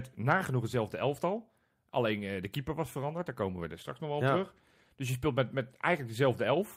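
No audible faults anywhere in the speech.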